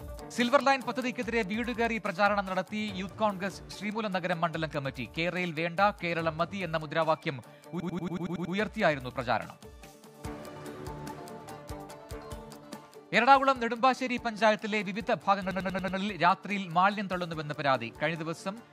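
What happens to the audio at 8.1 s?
At 8.1 s the sound is caught in a system hang loop from 7.80 to 8.55 s. The hardware replays one 93 ms slice, fitting a 4096-sample buffer, eight times at 10.8 Hz, a machine-gun stutter. The waveform shows identical repeating blocks and the spectrogram shows vertical stripes.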